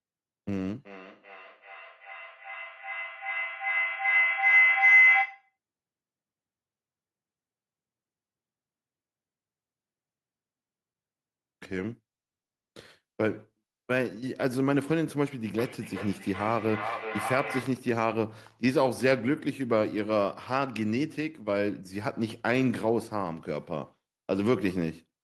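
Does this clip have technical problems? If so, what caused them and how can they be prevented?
Yes. From 0.85 to 5.56 s there is a feedback howl: two devices in the same room share the call, and each pass from loudspeaker to microphone and back comes out louder than the last, so the sound narrows into a tone near 2 kHz that peaks about 7 dB above the speech and pulses roughly every 0.4 s, matching the loop delay. A spectrogram would show a bright horizontal line near 2 kHz with regular bands of strength, and a waveform would show a swelling, nearly constant envelope. Muting one device's microphone or speaker, or leaving the call on one device, breaks the loop.

From 15.58 to 17.88 s there is feedback echo between two devices: one device plays what the other's microphone sent, that microphone captures it again, and neither echo canceller removes audio coming from the other device. The speech returns about every 0.4 s at roughly 7 dB below the original, each repeat thinner and more ringing. 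A waveform would show copies of each burst at regular spacing, and a spectrogram would show them losing low frequencies and leaving narrow resonant streaks. Joining with only one device per room, or using headphones, prevents it.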